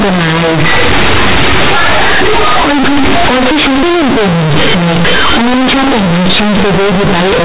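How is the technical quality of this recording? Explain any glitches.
The recording is badly damaged from start to finish by a single decoding fault. Companded audio read as linear, heard throughout the clip: the speech was stored as mu-law G.711 telephone coding at 8 kHz, but the bytes are being played back as plain linear 8-bit samples with no expansion step. Mu-law places small and large levels on a logarithmic scale, so without expansion every sign change throws the output across roughly half its range. Quiet and loud passages end up equally large and the waveform is badly bent. The result is very loud, buzzy distortion over the speech, with harsh noise filling the pauses where there should be near-silence.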